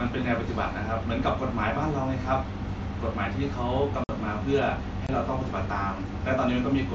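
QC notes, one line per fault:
4.04 to 4.09 s and 5.07 to 5.09 s, unconcealed Bluetooth headset packet loss: headset voice packets dropped and silence filled the gaps, with no concealment. This leaves holes of about 52 ms and 23 ms with hard edges, consistent with roughly seven and three lost 7.5 ms mSBC frames.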